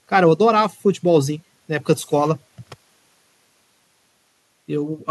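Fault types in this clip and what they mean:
There are no fault types in this clip.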